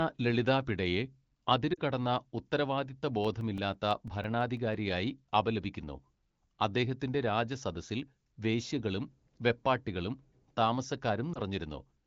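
At 1.74 to 1.80 s there are lost AMR speech frames: about 40 ms, consistent with two consecutive frames, fails to arrive intact over the AMR wideband (HD Voice) link, which is running at 15.85 kbit/s with light coding damage. The decoder repeats its last good pitch and spectral settings at falling gain, so the speech briefly smears and dips. On a spectrogram the harmonics freeze into flat, fading bands. The waveform shows a short drop in amplitude.

From 3.24 to 4.74 s come CD scratch ticks. Ten ticks arrive at a steady rate of roughly six to seven per second. Each is a few milliseconds long, and they are of uneven strength. A blemish on the disc is defeating the error correction once per revolution, and the player patches the gap. The waveform shows evenly spaced spikes or notches, and the spectrogram shows thin vertical broadband lines.

At 11.34 to 11.40 s a single lost AMR speech frame, about 20 ms, produces a brief warble or dip. 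It shows as a momentary smoothed, dimmed slice in the spectrogram.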